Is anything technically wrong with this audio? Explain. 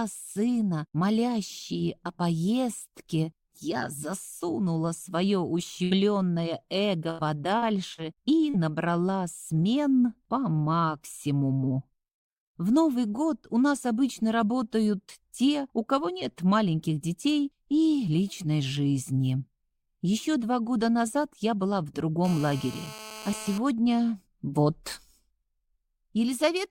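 Yes, there are three kinds of fault, clustered around 6 to 8.6 seconds and again near 22 seconds.

A burst of packet loss hits at 5.83 to 5.94 s and again at 7.11 to 7.22 s. Each time about 80 ms of audio never arrived in time, and the receiver stretched the last received sound across roughly 72 and 79 ms, fading it as it went. What you hear is a held buzz or dimming hiss, then a jump forward with a slice missing. A spectrogram shows frozen, smeared bands decaying, and the waveform shows a repeated, shrinking cycle.

Short concealed packet loss follows at 7.59 to 7.65 s, 7.94 to 8.01 s and 8.50 to 8.57 s. Each is about 40 ms that reached the decoder too late, patched with extrapolated pitch or shaped noise for 34 to 40 ms and crossfaded back. These come across as quick smears or wobbles, and a brief consonant can drop out. On a spectrogram they appear as narrow slices of blurred, over-regular harmonics, and the waveform shows a small stretch of too-periodic cycles.

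GSM phone buzz runs from 22.25 to 23.58 s, at about 16 dB below the programme level. A 2G phone on a call was transmitting in bursts at 217 Hz, and the audio circuitry demodulated those radio pulses into a hard, raspy buzz rich in harmonics. It has no relation to the programme. A spectrogram shows a comb of evenly spaced lines at multiples of 217 Hz, and the waveform shows a regular train of sharp pulses about 4.6 ms apart.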